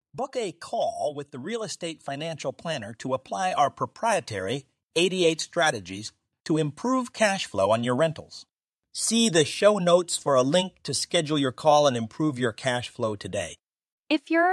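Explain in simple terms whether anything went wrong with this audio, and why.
Something did go wrong: the recording's automatic gain control decided the input was too quiet and slowly turned it up, an automatic gain rising from 1.31 to 5.93 seconds. You hear the speech and the background noise swell louder together over those few seconds.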